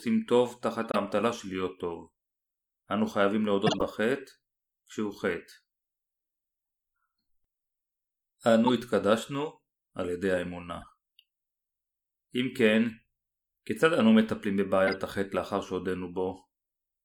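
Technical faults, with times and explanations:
0.81–0.96 s, 3.67–3.82 s, 8.64–8.70 s, 10.81–10.90 s, 14.87–14.94 s: corrupt frame decoded. The decoder played damaged compressed frames, misplacing energy across frequencies as brief chirps, blips or bursts of noise that peak at about -10 dBFS in the first two and about -15 dBFS at 8.6 s and 14.9 s, with the 10.8 s burst much fainter at about -35 dBFS.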